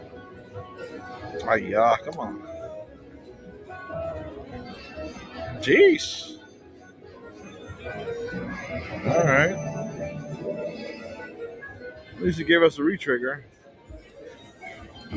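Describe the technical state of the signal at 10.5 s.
At 10.5 s, as throughout the clip, a speech noise suppressor is acting on non-speech sound. It treats sustained tones, ambience and decay as noise, letting onsets through while held parts drop by around 15 dB, so the sound pumps and thins within the call's 8 kHz bandwidth.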